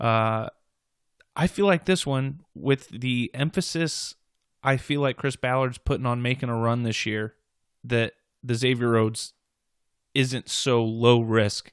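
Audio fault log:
Nothing stood out on listening to this speech recording.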